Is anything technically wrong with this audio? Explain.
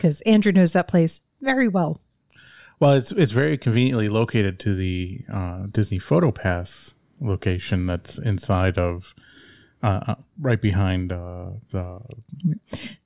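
No, nothing in this speech recording stood out as a technical problem on listening.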